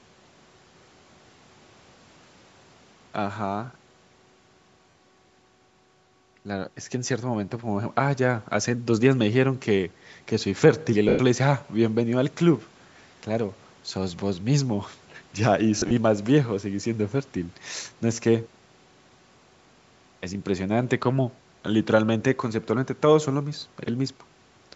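Lost LE Audio frames at 4.90–4.95, 11.09–11.19, 15.79–15.92 (scattered, short bursts) and 23.59–23.62 s: the decoder repeats the last spectrum with scrambled phase, so speech turns to a brief noisy smear. On a spectrogram these show as blurred vertical patches, and the waveform thins and fades during the 100 ms gap.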